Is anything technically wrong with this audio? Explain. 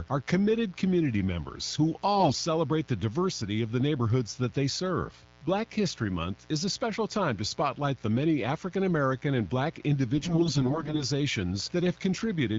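Yes, two faults are audible in this speech. Throughout, mains buzz: switching spikes riding on 60 Hz power leak into the signal at about 30 dB below it, so their harmonics produce a steady, raspy buzz. From 2.16 to 2.40 s and again from 10.15 to 11.04 s there are AMR bit errors: flipped low-priority bits in the frames, several percent at first and closer to a tenth later, misplace excitation pulses and skew the fine parameters. The speech keeps its pitch and level but turns hoarse, scratchy and gargly. The AMR-WB coding at 12.65 kbit/s adds only light colouring.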